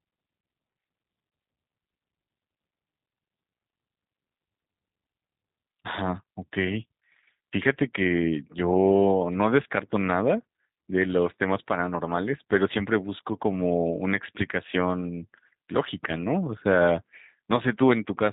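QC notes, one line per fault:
Throughout, G.729 codec: the speech carries the plainly audible roughness of a low-rate CELP voice coder. The sound fits G.729A at 8 kbit/s, where each 10 ms frame is rebuilt from a vocal tract filter, a pitch predictor and a handful of pulses. That sparse rebuilding gives the slightly buzzy, synthetic texture, and nothing above 3.8 kHz survives, so sibilants and airiness are missing.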